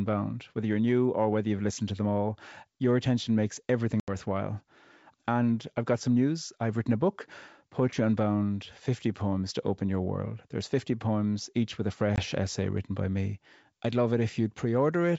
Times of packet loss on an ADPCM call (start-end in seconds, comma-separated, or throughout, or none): 4.00-4.11, 12.16-12.20